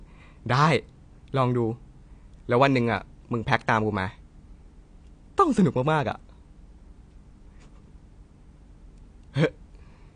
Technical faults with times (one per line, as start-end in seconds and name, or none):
0.00-10.16 AAC compression